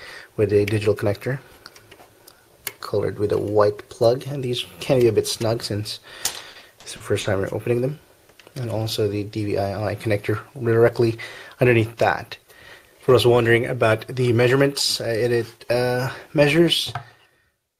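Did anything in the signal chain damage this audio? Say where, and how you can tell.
Yes: repeated packet loss (robotic sound) at the network stage, 6.31 to 7.27 s. Seven gaps, the longest 50 ms, are patched by stretching the preceding sound, leaving choppy audio with pieces missing.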